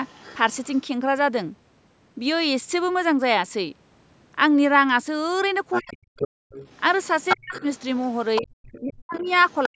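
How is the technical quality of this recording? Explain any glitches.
The recording is compromised by two echo-related faults on a speech call. A second voice bleeds through, and the main talker is repeatedly turned down while both sides overlap. The bandwidth tops out at 8 kHz, as expected from the call's microphone processing.

Other side's voice leaking through: a faint second voice is heard from 0.06 to 0.82 s at about 25 dB below the talker. It returns much more strongly from 5.71 to 8.8 s, only about 10 dB down, and again from 9.11 to 9.68 s at about 20 dB down. The likely cause is the far end playing on the talker's loudspeaker and reaching the microphone, with the echo canceller leaving a residue.

Speech suppressed in double talk: the talker's voice drops out or sinks sharply from 5.8 to 6.2 s, 7.36 to 7.54 s, 8.8 to 9.29 s and 9.66 s to the end, by around 40 dB. A shallower dip of roughly 25 dB occurs from 8.41 to 8.49 s. 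These gaps overlap the leakage stretches. The echo canceller likely could not tell the talker from the echo and attenuated everything while both were present.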